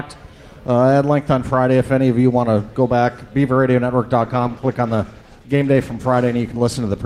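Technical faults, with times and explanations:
4.22–7.06 s, call bitrate drop: the encoder gets far fewer bits, fitting a fall from about 48 to 14 kbps, so the sound turns coarse, watery and dull, worst for 2.14 s. Unlike packet loss there are no gaps, and unlike simple filtering the texture itself degrades.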